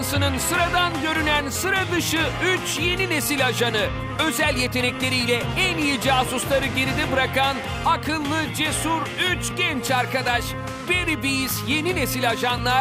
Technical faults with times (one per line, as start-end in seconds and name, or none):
8.49-12.58 periodic USB or driver dropouts